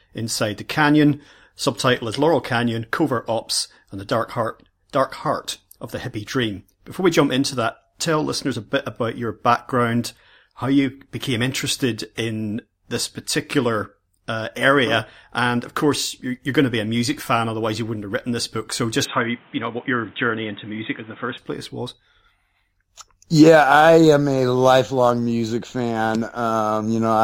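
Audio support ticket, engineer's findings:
19.05–21.38 s, ending just before "place was": sound turns dull, nothing above 3.8 kHz, new noise floor about 30 dB down, no gap, no level jump. Likely input switched to a poorer device. Spectrogram shows a flat top cut at 3.8 kHz.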